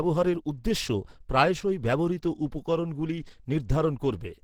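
Speech runs the whole clip with plainly audible Opus compression damage, likely from an Opus encoder at a low rate. The voice sounds hoarse and muffled, with a grainy, rough edge on sustained sounds. That character points to the hybrid mode, where a speech coder handles the low band and a transform coder fills the top. It fits a rate around 16 kbps. The band stays wide, reaching about 20.3 kHz.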